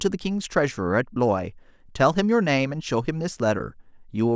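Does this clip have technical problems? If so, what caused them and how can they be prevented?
No, this speech recording shows no technical faults, so there is nothing to trace back or prevent.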